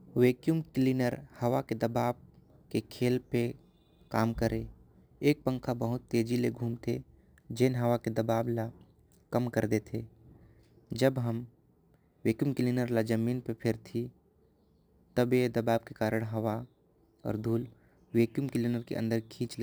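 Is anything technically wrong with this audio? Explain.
Yes. Throughout the speech there is crude rate conversion. The sample rate was changed by simply repeating the nearest samples rather than filtering and interpolating, which fits a step from 32 kHz up to 44.1 kHz. The irregular repeat pattern leaves an error roughly 30 dB below the speech, heard as a gritty, inharmonic fizz that rides on louder and brighter syllables. Unlike codec artefacts, it does not swirl or smear. It is a steady, signal-locked roughness with tones unrelated to the voice.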